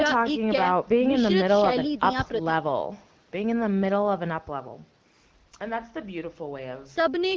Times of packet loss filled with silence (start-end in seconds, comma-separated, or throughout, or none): none